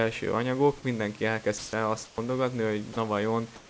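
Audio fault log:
1.58–1.73 s, 2.06–2.18 s, 3.56–3.70 s: comfort noise in place of the background. After "anyagok mindenki", steady featureless hiss replaces real background, shifting about +2, -4 and 0 dB. Likely discontinuous transmission.
2.93–2.96 s: sound dropped by the voice detector. A 30 ms stretch of sound vanishes into steady noise. The detector likely mistook it for background.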